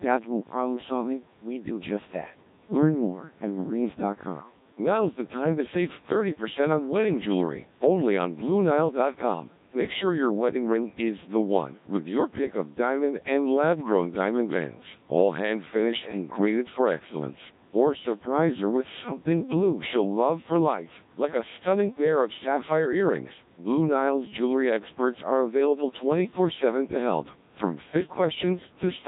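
From start to finish the speech carries the sound of the Codec 2 vocoder, heavily damaged, with a coarseness that fits a rate around 1.3 kbit/s. Only pitch, voicing, energy and a rough spectral envelope survive, and the decoder rebuilds the voice from sine waves, so it sounds robotic and buzzy. On a spectrogram the harmonics look smeared and blocky, with the lowest bass taken out by the call's microphone processing, and the waveform no longer resembles natural speech.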